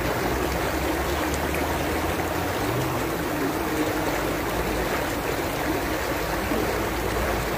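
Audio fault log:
Throughout: low bit depth with noise shaping. The audio has been reduced to very few bits, around 7, and the rounding error is pushed upward in frequency. This produces a steady, thin hiss only about 15 dB below the signal, climbing sharply toward the top of the band.
0.28–0.33 s, 1.58–1.64 s, 5.02–5.07 s, 7.20–7.24 s: compressed frames skipped. The decoder dropped runs of frames, consistent with frames of about 46 ms, so the sound jumps ahead by roughly 200 ms, 200 ms, 150 ms and 300 ms.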